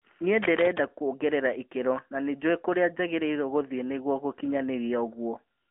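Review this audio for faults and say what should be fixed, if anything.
Throughout, you get the AMR narrowband mobile codec sound: nothing above 3.6 kHz, a thin phone-line band, and buzzy, synthetic speech that fits about 10.2 kbps.

From 0.42 to 0.8 s, before "kuongerera ikĩro na nĩ", there's cable scratch noise, a rustling burst nearly as loud as the speech, likely from a worn connector shifting.

Record over a wideband path instead of a mobile call, and swap or secure that cable and connector before the next take.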